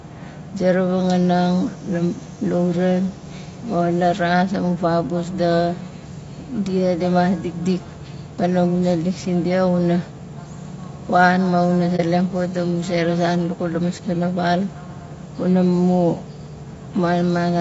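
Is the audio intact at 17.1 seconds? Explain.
No. At 17.1 seconds the speech, like the whole clip, sounds rough and grainy, with noise filling the gaps between the pitch harmonics and a thin, synthetic-sounding top band. This is likely low-delay AAC compression (AAC-ELD), at a rate that fits roughly 32 kbps. Its very short frames cannot resolve the harmonics finely, so the damage is a steady graininess rather than the pre-echo smears of long-frame AAC or the momentary gaps of packet loss.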